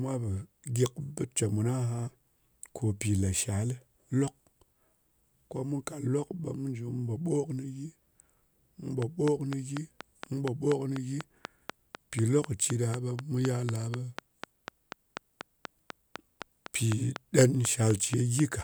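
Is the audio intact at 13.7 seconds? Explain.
No. A train of clicks runs from 9.02 s to 18.40 s, covering 13.7 s: around forty near-identical pulses at a steady 4 per second, popping well above the speech and in its pauses, most likely interference from nearby equipment or a faulty connection or power supply.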